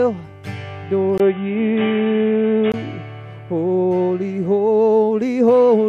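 At 1.18 s the sound abruptly loses its top end after a brief dropout of about 20 ms, and nothing remains above roughly 3.8 kHz. The level shifts by a few decibels and a faint new noise floor appears, well below the signal. The likely cause is an input switched to a poorer device, a narrower-band microphone path with its own tone and gain. At 2.74 s the full bandwidth returns and the audio opens up again.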